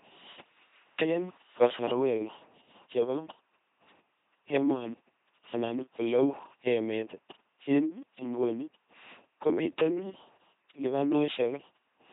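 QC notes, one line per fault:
Throughout: LPC-10 vocoder. The speech is buzzy and robotic, with nothing above 3.8 kHz. Each moment is resynthesised as either a pulse train or noise through a ten-pole filter, so misjudged voicing gives stray buzz or hiss, consistent with 2.4 kbit/s LPC-10.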